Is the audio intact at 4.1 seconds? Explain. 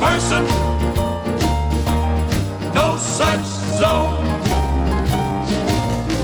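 No. At 4.1 seconds the audio sits inside a time-stretched section that runs from 3.19 s to the end at 6.23 s. From 3.19 s the pace abruptly drops to about 0.74 of normal speed, yet the pitch holds steady, and the sound drags. The likely cause is software lengthening the passage by repeating short slices to preserve pitch. A plain playback slowdown would also lower the pitch, which doesn't happen here.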